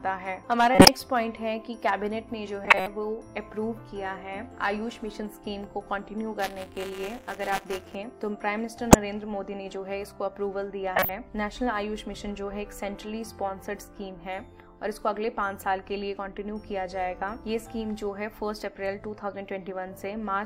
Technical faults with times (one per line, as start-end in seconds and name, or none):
0.75-0.88 corrupt frame decoded
2.64-2.87 corrupt frame decoded
6.39-7.95 buffer tearing
8.91-8.95 corrupt frame decoded
10.96-11.09 corrupt frame decoded